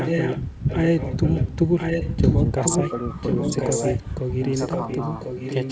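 From the start to 1.56 s, a delayed copy of the speech runs under the live sound. It trails by about 1.05 s. It is only somewhat quieter than the speech. This is echo leak. The likely cause is a far-side loudspeaker whose echo canceller let its microphone pick-up through. The copy returns at 1.77 to 2.4 s, and again at 2.61 to 2.93 s, where it is about as loud as the speech. It returns again at 3.14 to 4.27 s. From 4.51 s to the end it is fainter. All of it, like the speech, stops at 8 kHz.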